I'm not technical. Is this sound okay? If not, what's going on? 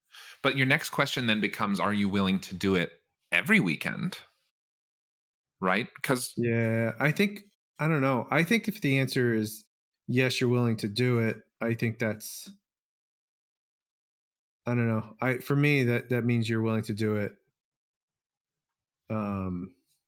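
Yes, this recording is fine, with no technical problems to point out. Nothing went wrong with how the sound was captured or handled.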